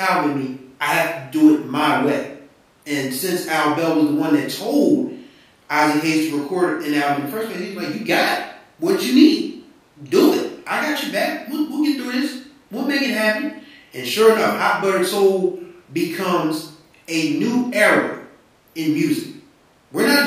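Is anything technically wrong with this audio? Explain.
No, nothing technically wrong turns up here; the speech comes through steady and intact the whole way.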